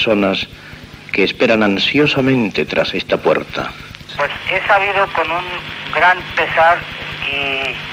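Nothing in the audio stands out as a technical fault; it just runs along without a hitch from the first moment to the last.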